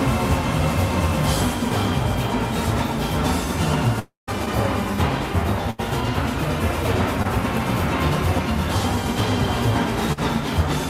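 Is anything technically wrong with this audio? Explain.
Yes, the audio has three kinds of transmission fault.

From 3.99 to 4.29 s, the sound trails into a fading buzz or hiss and then about 0.16 s of silence, with roughly 0.28 s lost. This is likely a long network dropout.

At 5.71 to 5.80 s and 10.13 to 10.19 s, a burst of packet loss cut out 80 ms and 40 ms respectively. Each time the receiver stretched the last sound and faded it, so you hear a dying buzz or hiss before the audio jumps ahead.

At 7.22 to 7.27 s, a short concealed packet loss occurred: about 20 ms missed the decoder. The continued and blended fill comes through as a brief smear.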